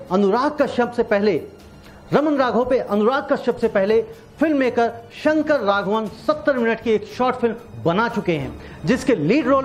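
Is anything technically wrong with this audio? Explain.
No, nothing technically wrong stands out in this audio; the signal holds steady throughout with no audible faults.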